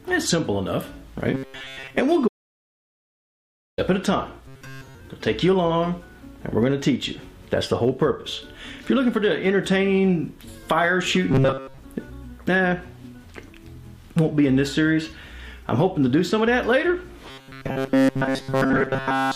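From 1.34 to 2.00 s the sound goes rigid and metallic, a fixed buzz at 134 Hz laid over it while the underlying movement is still faintly traceable. This is robotic sound from repeated short buffers. Playback likely ran short of fresh audio and kept looping the most recent snippet, and a 134 Hz buzz fits a repeated chunk of about 7.5 ms. Most of the real audio in that stretch is skipped.

From 2.28 to 3.78 s the sound cuts out completely for about 1.5 s and then resumes abruptly mid-flow. This is an audio dropout to silence. The gap is silent with no room tone, so the input was likely lost while recording continued to write silence. Nothing from that span survives.

The same robotic buzz at 134 Hz returns from 4.48 to 4.95 s, from 11.31 to 11.78 s, and from 17.30 s through to the end of the clip. Each time it has the same hard, looped character as the first episode.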